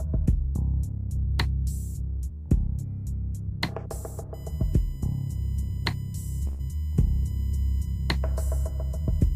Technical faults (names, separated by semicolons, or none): USB whine; burst of packet loss